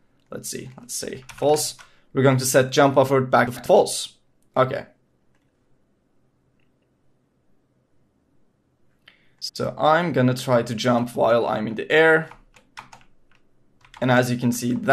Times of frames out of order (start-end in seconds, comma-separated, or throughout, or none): 3.47-3.67, 9.42-9.56